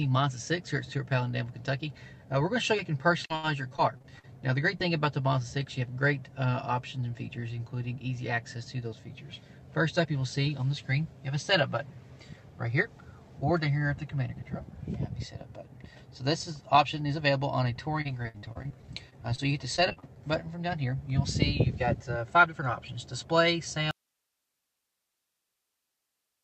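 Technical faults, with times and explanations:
3.25 to 4.82 s, repeated packet loss (robotic sound): the sound turns choppy and robotic, with nine short holes, the longest 76 ms, each patched by stretching the last bit of audio, so about 16% of this stretch is filled-in rather than real signal.
18.01 to 20.18 s, repeated packet loss (robotic sound): a denser run of the same choppy, robotic texture, seventeen holes up to 57 ms, concealed by repeating what came before, leaving roughly 18% of the span synthetic and pieces of the sound missing.
21.66 to 22.63 s, jitter buffer speed-up: the audio briefly sounds hurried, running about 8% fast at unchanged pitch, because the receiver trimmed around a tenth of a second in pitch-period slices to drain a backlog of late-arriving packets.
23.91 s to the end, audio dropout to a faint residue: the sound cuts off abruptly rather than fading, leaving only hiss about 55 dB below the signal, likely because the incoming signal was lost while the playback path stayed open.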